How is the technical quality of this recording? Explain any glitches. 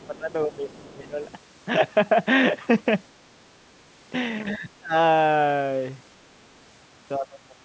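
The recording has two recurring call-processing faults, heard through band-limited call audio with nothing above 8 kHz.

Other side's voice leaking through, at 0.02 to 0.07 s and 0.70 to 0.77 s: faint scraps of a second voice, far below the main speech, most likely loudspeaker echo the echo canceller left behind.

Speech suppressed in double talk, at 0.08 to 1.2 s, 4.55 to 4.93 s and 7.17 s to the end: the voice dips, mildly at first and deeply at the end. The likely cause is the echo canceller turning everything down while both sides talked.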